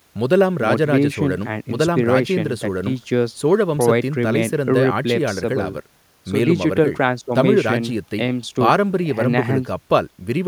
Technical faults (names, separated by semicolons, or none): none